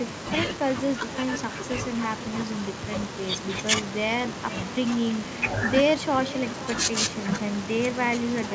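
With no echo canceller at the far end, that side's loudspeaker feeds the call back into its microphone and returns it. Throughout, the speech is shadowed about half a second later by a thinner copy, about 17 dB quieter, within a call band ending at 8 kHz.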